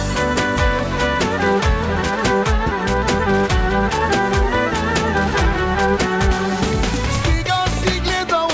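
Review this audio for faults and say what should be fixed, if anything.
No faults heard here; nothing needs fixing.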